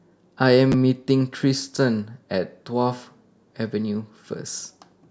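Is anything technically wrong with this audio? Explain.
Yes. Chunks out of order occur at 0.72 to 0.74 s and 1.75 to 1.78 s. A 10 ms block of the speech plays one chunk late, then two chunks late, so nothing is lost but the sequence is scrambled, giving brief jumbled blips at the hard joins.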